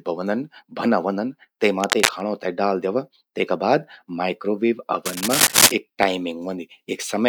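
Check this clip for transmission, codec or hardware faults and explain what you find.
Cable scratch noise occurs twice, from 1.80 to 2.21 s and from 5.05 to 5.72 s. Both bursts are dense, uneven crackling and rustling laid over the speech, roughly as loud as the speech in the first and somewhat louder in the second. The likely cause is a worn cable, connector or control being moved, so its contact resistance flickers rapidly and injects irregular noise into the signal for as long as the movement lasts.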